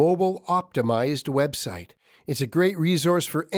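No technical faults can be heard in this recording.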